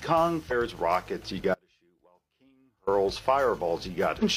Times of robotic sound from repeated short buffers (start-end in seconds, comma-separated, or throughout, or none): none